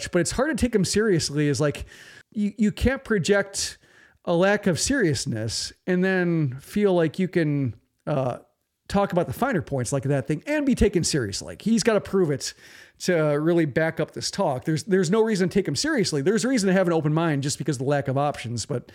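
Nothing stood out as a technical fault on listening to this speech recording.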